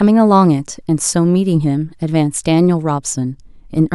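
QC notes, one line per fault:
No fault found, so there are no QC notes to log.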